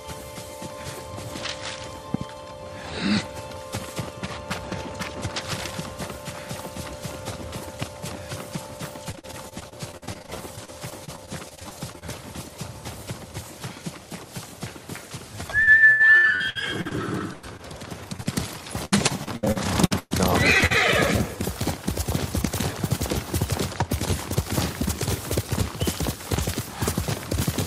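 A voltage spike, likely from a plug, switch, static discharge or driver glitch, lands on the signal as a loud pop: a double pop at 2.14 to 2.24 s, then single ones at 7.82 to 7.85 s and 26.34 to 26.36 s. Each peaks about 15 dB above the sound, which carries on underneath.

Repeated packet loss strikes from 9.11 to 12.04 s and again from 15.64 to 20.72 s. The missing stretches are patched by extending the preceding sound, covering about a fifth of each span, with holes up to 118 ms in the second. The audio turns choppy and robotic.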